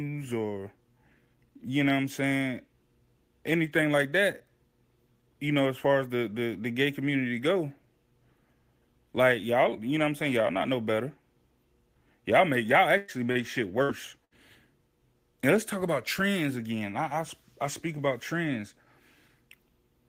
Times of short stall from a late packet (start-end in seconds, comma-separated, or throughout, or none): 13.32-13.38